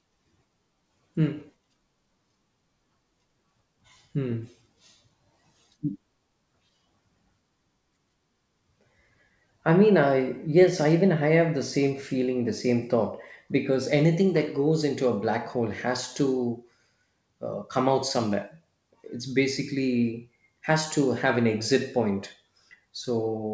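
Nothing here goes wrong at any point; the speech just comes across the way a call line normally carries it, with the top end stopping around 8 kHz, which fits a wideband call codec like G.722.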